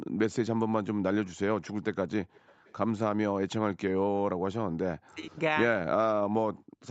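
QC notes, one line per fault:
2.33–2.75 s, echo leak: a faint delayed copy of the speech surfaces, trailing the original by about 412 ms and sitting roughly 30 dB below it, so it comes through as a quiet repeat rather than a clear double. This is likely an echo leak, where the far end's loudspeaker was picked up by its microphone and the echo canceller failed to strip all of it before sending it back down the line.
4.96–5.38 s, speech suppressed in double talk: the speech dips sharply for about 400 ms, falling by something like 35 dB at its deepest, so it thins out and partly vanishes before recovering. The likely cause is the echo canceller meeting both sides talking at once; unable to tell the local talker apart from loudspeaker echo, it pulled the whole signal down together.
6.53–6.81 s, background gated by the echo canceller: the room sound drops away abruptly, by about 23 dB at its lowest, for roughly 300 ms, then returns. 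While the loudspeaker was playing, the echo canceller clamped the microphone hard, taking the background down with it, and released once playback eased. The band stops at 8 kHz, consistent with the call's microphone processing.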